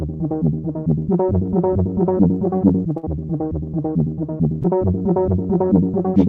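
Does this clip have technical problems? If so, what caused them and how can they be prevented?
Yes. At 2.97 to 3.05 s, a burst of packet loss dropped a run of consecutive packets. The receiver held the last sound for about 55 ms, fading it as the gap went on, then skipped ahead, so about 60 ms of the music is missing and replaced by a dying tail. Forward error correction, a slightly deeper jitter buffer or a more stable network connection would reduce such bursts.

At 4.63 to 4.66 s, a short concealed packet loss left a small hole that the decoder patched by extending the preceding sound for about 10 ms before blending back in. This leaves a brief smear in the music, with about 20 ms lost. Packet redundancy such as Opus in-band error correction would let the receiver rebuild these single drops.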